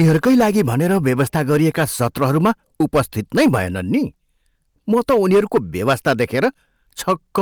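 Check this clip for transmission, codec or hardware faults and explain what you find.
One fault runs through the whole speech clip: hard clipping. The level is driven about 8 dB past what a stage can pass, so a few percent of the samples are sheared flat. The waveform shows squared-off peaks, and a spectrogram shows harmonic smear rising high on loud syllables, heard as harsh crackle.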